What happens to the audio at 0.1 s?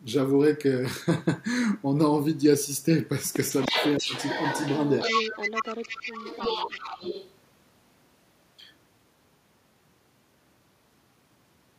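Nothing goes wrong at 0.1 s; the speech there plays through intact, with no dropout, click or distortion.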